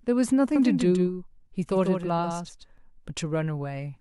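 From 0.56 to 2.78 s there is a doubled audio track, likely from a second capture path or an edit leaving two copies out of step. A full-band copy trails by around 150 ms, somewhat quieter, without decay, starting and stopping abruptly.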